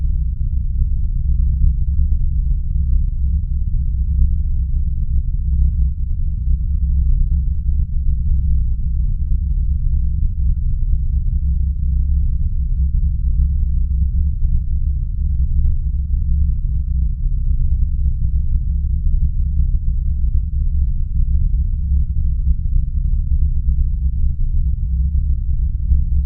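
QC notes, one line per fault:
Throughout, overlap-add ripple: the level pumps up and down by about 6 dB around a hundred times a second, so everything picks up a buzzy, metallic roughness riding on top of the sound. That's the signature of audio being chopped into windowed frames and stitched back together with an overlap whose windows don't add up to a flat gain, so every frame boundary leaves a dip or bump in level.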